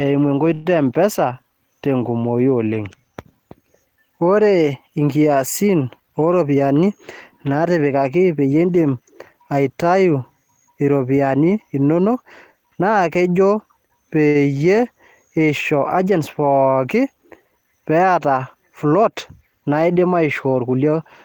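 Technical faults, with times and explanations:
0.53–0.67 s, call audio freeze: the speech halts and the last sound is carried on as a fading buzz or hiss for about 116 ms, then resumes at "e mpesa tenkumoi oleng" with nothing lost, likely because delayed packets left the jitter buffer empty.
6.34–6.87 s, 7.48–8.02 s and 18.25–19.43 s, jitter buffer speed-up: the speech runs about 10%, 10% and 6% fast at unchanged pitch, sounding hurried, as the receiver trims tiny pitch-period slices, roughly 50, 70 and 70 ms in all, to shrink excess buffered delay.
14.28–14.37 s, short stall from a late packet: one sound is held about 68 ms too long with a slight buzz or dip, because the jitter buffer ran dry waiting for a packet and stretched the last sound before continuing from the same point.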